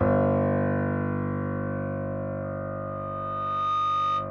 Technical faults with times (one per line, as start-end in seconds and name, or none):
2.43-4.30 loudspeaker feedback squeal